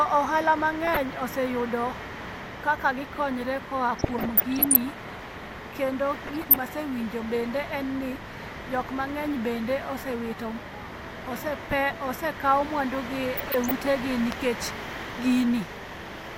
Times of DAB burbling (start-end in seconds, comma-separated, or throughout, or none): 0.85-1.21, 3.91-4.90, 6.27-6.56, 13.37-13.74